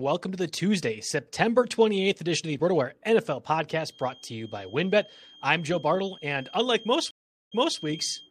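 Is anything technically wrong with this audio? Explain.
Yes. There are two faults.

From 3.84 s to the end of the clip, a feedback whistle sits behind the speech. It is a thin, steady tone at 3.2 kHz, roughly 25 dB below the speech. It swells and fades slowly in level but never grows into a howl. The likely cause is a loudspeaker-to-microphone loop running just short of runaway feedback. One frequency keeps ringing on its own without building up.

From 7.11 s to 7.79 s there is a stream reconnect. The audio cuts to silence for 0.41 s. The connection dropped, and the player reconnected with a fresh decoder. When the sound returns, it picks up about 0.28 s earlier than where it stopped. The server resent a short burst, so that last stretch of speech plays twice.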